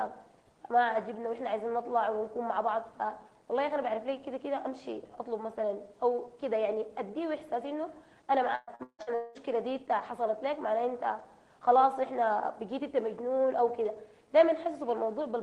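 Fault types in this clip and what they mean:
Repeated packet loss (robotic sound): Audio packets go missing again and again, and each hole is filled by stretching the last sound. From 8.55 to 9.38 s there are five gaps, the longest 199 ms. About two thirds of that stretch is patched, so it sounds choppy and robotic.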